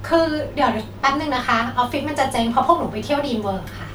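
No technical faults can be heard anywhere in this recording.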